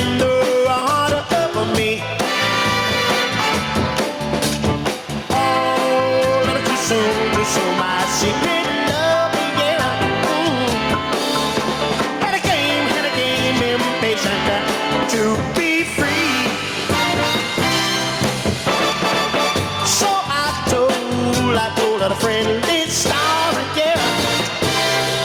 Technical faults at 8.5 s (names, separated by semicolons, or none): gain pumping